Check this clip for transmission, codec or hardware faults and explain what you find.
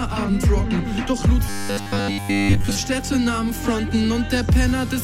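One fault is present. From 1.47 to 2.80 s there is robotic sound from repeated short buffers. The audio becomes a rigid, metallic buzz near 100 Hz. The likely cause is late-arriving audio, with a short 10 ms chunk repeated to fill gaps while most of the real sound is skipped.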